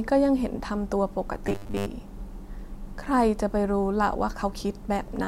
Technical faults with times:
1.47-1.86 robotic sound from repeated short buffers

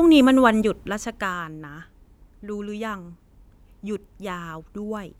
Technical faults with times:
none

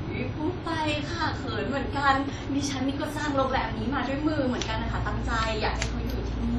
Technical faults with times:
0.00-6.58 WMA compression

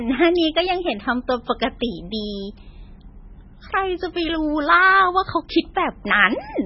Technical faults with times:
0.00-6.66 MP3 compression

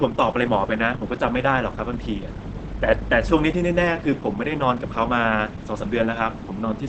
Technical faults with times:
0.00-6.88 Opus compression

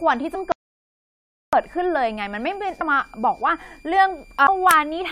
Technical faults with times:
0.00-5.12 switching supply whistle
0.34 damaged data in a compressed stream
0.52-1.53 playback stall
2.80 damaged data in a compressed stream
4.45-4.48 damaged data in a compressed stream

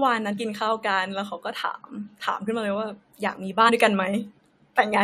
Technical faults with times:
0.36 compressed frames skipped
1.68 compressed frames skipped
3.68 compressed frames skipped

